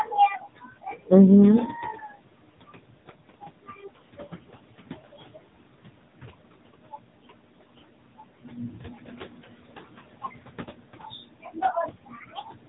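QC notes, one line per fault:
Throughout, noise suppressor artifacts: the room noise, which sits about 17 dB below the speech, is pulled down by about 21 dB in the gaps and comes back up under the speech, so the background pumps as the talker starts and stops. The suppressor decides frame by frame and band by band what counts as steady noise.
Throughout, AMR narrowband mobile codec: nothing reaches above about 3.8 kHz, so sibilants and consonant edges lose their top and the speech sounds boxed-in and phone-like. The codec damage is plainly audible. Speech is rebuilt from a vocal-tract model driven by a sparse pulse train, which gives a buzzy, synthetic edge to the voiced sounds and a swirl in the leftover noise. The coarseness fits an AMR-NB mode near 7.95 kbps.
0.05–1.11 s, 1.93–2.16 s, 6.83–7.8 s, and 8.13 s to the end, speech cut by the noise suppressor: the suppressor mistook parts of the speech for background and turned them down with it, so soft consonants, word tails and quieter stretches sound swallowed. 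The cuts reach about 22 dB in the first, third and fourth spans and about 12 dB in the second. The first span loses roughly half a second and the second around 150 ms. The third loses around 300 ms, and the final span loses about 4 s in total.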